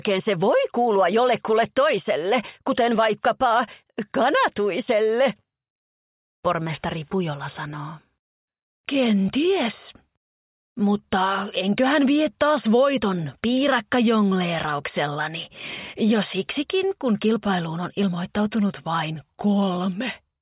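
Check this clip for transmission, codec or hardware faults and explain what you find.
Nothing stood out on listening to this clip.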